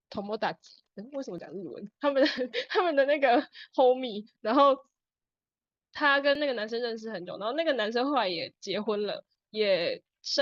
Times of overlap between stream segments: 1.38, 2.38, 6.35, 9.35

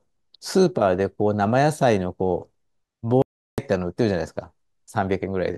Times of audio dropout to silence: 3.22-3.58

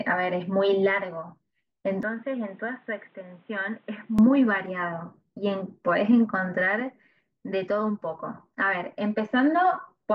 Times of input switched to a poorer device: 2.03-4.19

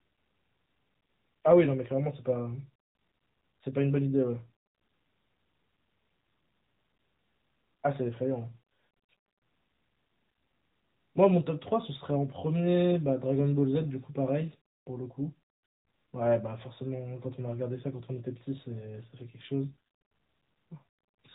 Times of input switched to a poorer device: none

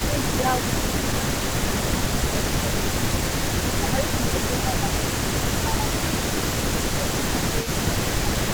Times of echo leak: 0.00-8.54

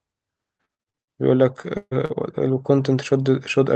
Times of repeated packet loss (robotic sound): 0.57-1.12

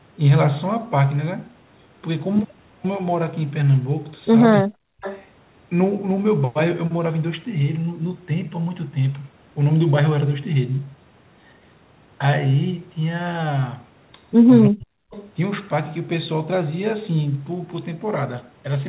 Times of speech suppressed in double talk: 4.63-4.79, 14.68-15.01

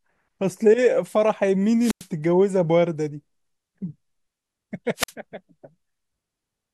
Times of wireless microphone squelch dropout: 1.79-2.07, 4.96-5.12

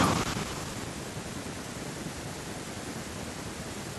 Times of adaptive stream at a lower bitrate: none

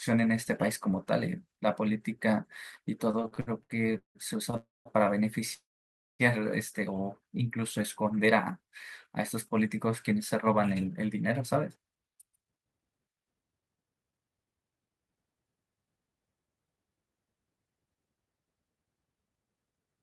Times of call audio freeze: 4.57-4.88, 5.54-6.22

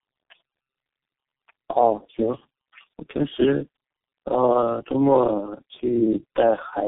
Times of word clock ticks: none

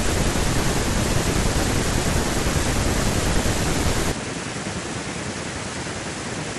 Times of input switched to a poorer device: 4.12-6.58

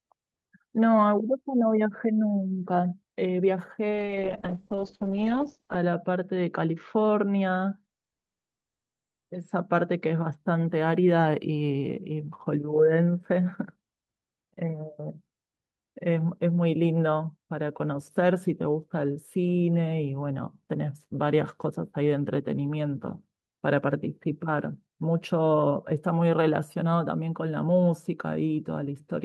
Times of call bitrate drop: 3.93-10.43

